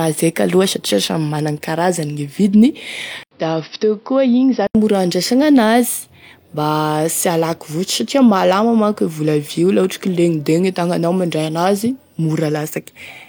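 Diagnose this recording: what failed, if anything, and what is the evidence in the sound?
Input switched to a poorer device from 3.23 to 4.75 s: after an 80 ms gap, speech is cut off above 5.8 kHz, slightly quieter, with new background noise. This is likely a driver-level change of microphone.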